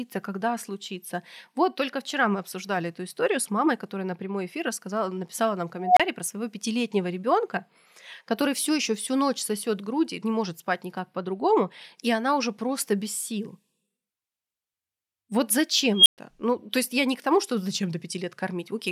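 Speech with an unstable filter at 5.81 s, after "эфир рассказала написала нам", and at 16.0 s: a tone near 700 Hz, then near 3 kHz, swells over 0.16 s and 0.10 s and clips. It then cuts to silence for 30 ms and 120 ms. That runaway swell ending in a dropout, rather than a sustained howl, separates it from acoustic feedback.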